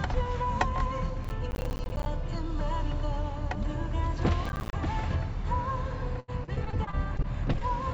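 Everyday sound, carried over a call link that leaves nothing above 8 kHz, which fits a G.722 codec. From 1.25 to 2.06 s, and again more briefly from 4.46 to 4.73 s, a gritty crackle tears across the sound. This is processor overload crackle: the processor keeps missing its deadlines for buffers of around 10 ms. Each miss drops in a hard-edged slice of silence, dozens in a row on the longer burst, and the crackle stops as the load eases. From 6.20 to 7.70 s the sound turns choppy with pieces missing, the robotic sound of repeated packet loss. Roughly a dozen holes, the longest 79 ms, total 300 ms. About 285 ms of that is patched by stretching the preceding sound, so concealment covers about a fifth of the span.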